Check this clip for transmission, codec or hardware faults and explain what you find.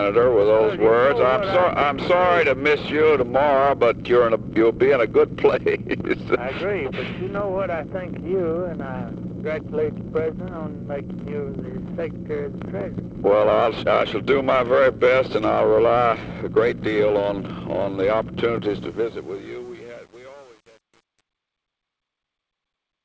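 One fault shows up: truncation distortion on the closing fade. The audio has passed through a call path that fits a G.722 codec, with nothing above 8 kHz.

Truncation distortion on a fade runs from 18.65 s to the end at 23.04 s, as the level fades out from about 18.6 s. The fading stage keeps too few bits and adds no dither, which points to about 8 bits. Quiet parts become coarse square steps. From 19.01 s onward it is gritty.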